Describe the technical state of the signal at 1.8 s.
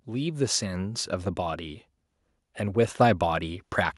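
At 1.8 s the speech signal is intact, with no audible fault at that point.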